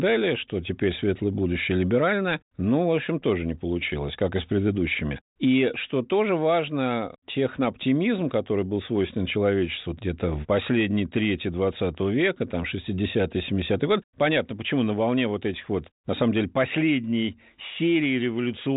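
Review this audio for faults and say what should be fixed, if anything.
Nothing in the recording needs fixing. The speech runs through a G.726 ADPCM link at 40 kbit/s, which leaves at most a faint trace of coding noise and passes nothing above 3.8 kHz, as expected for that telephone-band path.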